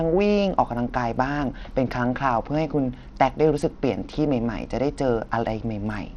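From start to finish, the speech has a dull, unstable top end. The treble thins out and flickers. A gritty noise and aliasing cling to the sound. This is likely Bluetooth SBC compression, starved of bits in the upper sub-bands, which fits a low bitrate near 80 kbps.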